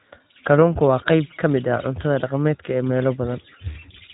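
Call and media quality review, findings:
iLBC codec, throughout the speech: band ends at 3.8 kHz, with plainly audible rough, synthetic texture. Each frame's excitation coded independently; grain fits 20 ms frames near 15 kbps. Unlike a plain low-pass or clean narrowband G.711 path, the roughness is in the signal itself.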